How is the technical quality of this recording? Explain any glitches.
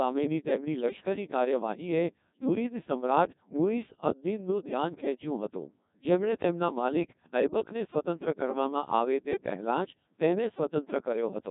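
Quality is poor, and the damage runs the whole way through. The speech has gone through the Codec 2 vocoder, and it sounds heavily processed: robotic and buzzy, with nothing above about 3.8 kHz. Rather than keeping the waveform, the decoder rebuilds the voice from sine waves using only pitch, voicing, energy and a rough spectral shape. The heavy smearing fits a very low rate of around 1.6 kbit/s.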